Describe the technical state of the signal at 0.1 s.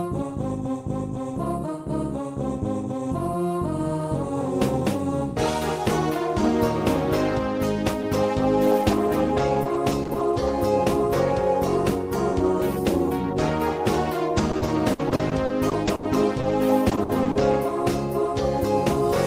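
Nothing is wrong with the signal at 0.1 s; the audio is intact there.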